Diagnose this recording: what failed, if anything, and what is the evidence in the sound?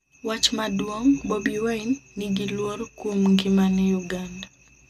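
Nothing failed in this recording, and the sound shows no evidence of a fault at any stage.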